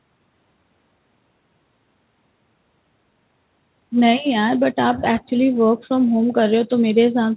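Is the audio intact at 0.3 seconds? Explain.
Yes, the audio is intact at 0.3 seconds, with only the narrowband sound of the call path, which carries nothing above 4 kHz.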